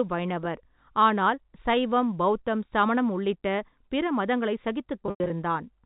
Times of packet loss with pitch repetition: 5.03-5.30

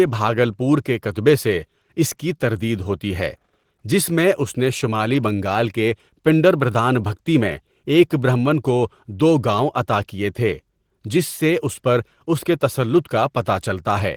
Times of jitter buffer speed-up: none

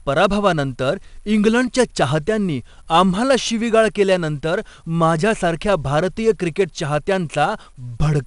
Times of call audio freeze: none

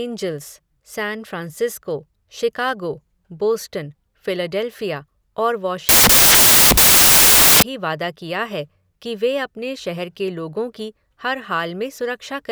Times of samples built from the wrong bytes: 5.89-7.62

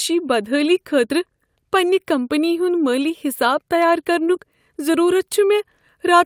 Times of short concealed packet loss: 4.25-4.29

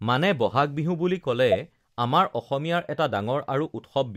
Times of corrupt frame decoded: 1.52-1.54

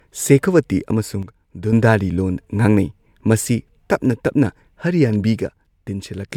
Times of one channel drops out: 1.23-1.73, 5.40-6.29

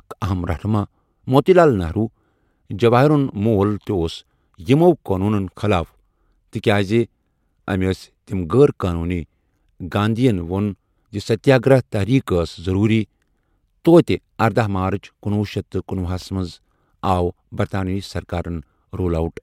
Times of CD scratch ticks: 16.22-17.30

